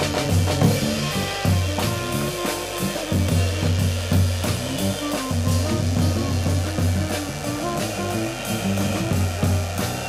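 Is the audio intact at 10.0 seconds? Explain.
No. At 10.0 seconds, as through the whole clip, mains buzz is present. Something in the signal chain, such as a dimmer, a rectifier or an unshielded cable, is letting sharp switching spikes from the 50 Hz supply leak in, twice in every mains cycle. Those spikes carry a dense stack of 50 Hz harmonics reaching into the kilohertz range, so the audio sits on a steady, raspy buzz roughly 15 dB below the wanted sound.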